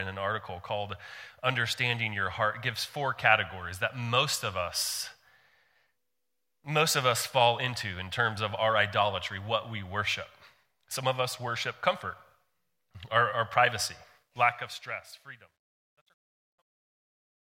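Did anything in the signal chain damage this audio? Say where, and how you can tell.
Yes. Right after "our our privacy", the fade-out from 14.18 s shows truncation distortion, which is a sample-format conversion problem. The tail turns gritty and is worst from 15.27 s to the end. An undithered fade is quantising to coarse steps, which points to roughly a 12-bit stage.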